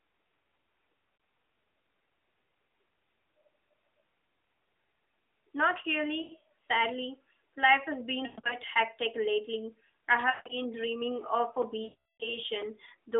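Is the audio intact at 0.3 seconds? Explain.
Yes, the audio is intact at 0.3 s: the speech there carries only the narrow telephone band of the AMR-NB path it passes through, with no fault at that moment.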